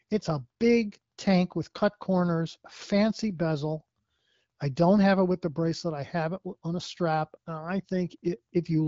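No technical faults occur in this speech at any point, so there is nothing to describe in time order.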